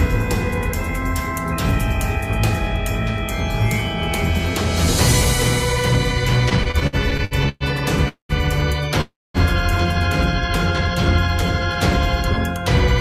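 From 6.49 to 7.63 s the sound drags and stutters. These are repeated stalls (stutter). The packets kept arriving late, so the jitter buffer ran dry ten times. Each time, the receiver stretched the last sound to cover the wait. Together the gaps add 330 ms, nearly a third of that stretch. The longest is 115 ms. Nothing is lost. The sound just limps forward.

Two call audio freezes follow, at 8.08 to 8.32 s and 9.01 to 9.37 s. The cause is likely packets held up in transit, leaving the jitter buffer empty. In each, the last sound is held and fades, then drops to silence. The first fills 208 ms, with about 120 ms silent. The second fills 331 ms, with about 240 ms silent. Then the sound resumes where it stopped, later than before by the length of each gap.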